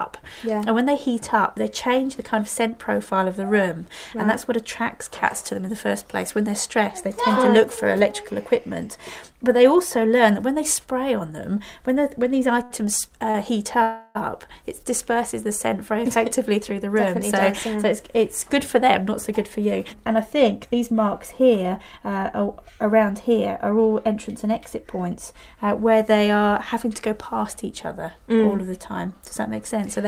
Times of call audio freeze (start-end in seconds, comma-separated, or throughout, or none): 13.82-14.17